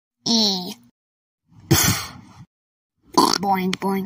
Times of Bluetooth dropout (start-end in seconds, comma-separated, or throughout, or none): none